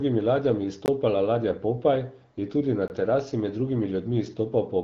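At 0.86 to 0.88 s and again at 2.88 to 2.90 s, between "je tudi na" and "terasi med", the speech drops into a hard-edged silent hole about 20 ms long. This is a gap between chunks: the audio was delivered in 2-second pieces, and each join leaves a short stretch of silence while no material is lost. Under the band-limited HD Voice (AMR wideband) sound, which stops near 7.3 kHz, the two holes arrive 2.02 s apart.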